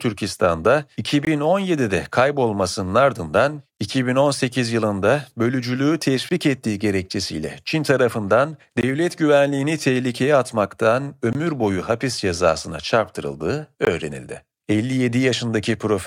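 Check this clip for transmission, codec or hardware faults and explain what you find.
The speech is interrupted by six 20 ms holes, at 1.25, 3.77, 6.29 ("yılında bölücülüğü"), 8.81, 11.33 ("güvenliğini tehlikeye atmaktan") and 13.85 s. This is a gap between chunks: the audio arrives in 2.5 s blocks, and silence is inserted at each join without any sound being lost.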